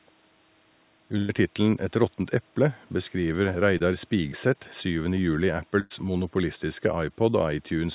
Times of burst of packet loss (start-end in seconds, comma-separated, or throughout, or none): 1.18-1.35, 5.80-5.92